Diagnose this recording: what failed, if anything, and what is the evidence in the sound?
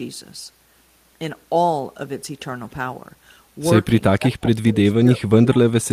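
Call processing likely failed here: when both ends spoke at once, the echo canceller could not separate this talker from loudspeaker echo and suppressed both. That is speech suppressed in double talk. From 4.18 s to the end, the speech drops sharply, at its deepest by about 30 dB.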